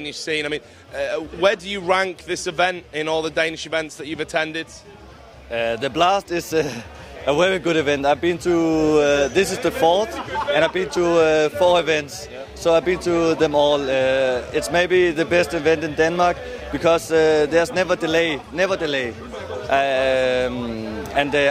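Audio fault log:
No faults detected in this audio.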